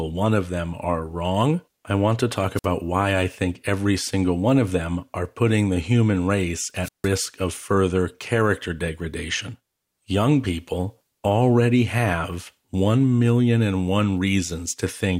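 At 2.55 to 2.66 s and again at 6.81 to 7.10 s, the speech suffers a wireless microphone squelch dropout. The radio link fades, hiss rises briefly, then the receiver mutes for about 53 ms and 159 ms. A spectrogram shows a broadband noise smear, then a blank gap, and the waveform flattens.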